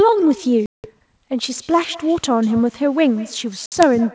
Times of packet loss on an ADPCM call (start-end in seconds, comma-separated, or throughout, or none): 0.66-0.88, 3.66-3.84